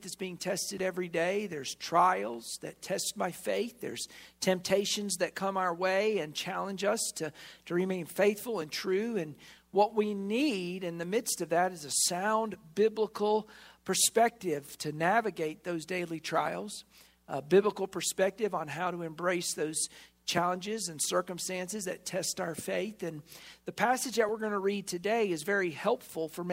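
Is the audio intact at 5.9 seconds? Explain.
No. At 5.9 s the audio lies within a run of clock drift buffer slips lasting from 0.78 to 24.29 s, heard as a regular click or pop every 3.92 s. The likely cause is two clocks roughly 700 ppm apart, so the buffer between them periodically drops or repeats around 150 samples.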